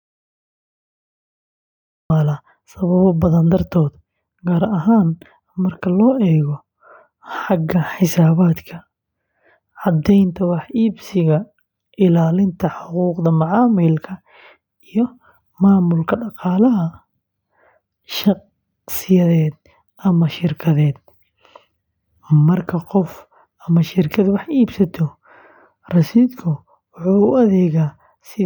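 From the very start until 2.1 s there is an audio dropout to silence: the clip opens already in silence, and the speech then enters abruptly mid-flow. The likely cause is an input that was lost, through a dropped connection or an accidental mute, while the recorder kept writing samples. What sets it apart from an ordinary pause or a noise gate is the complete absence of room tone or hiss, followed by a hard, unfaded entry.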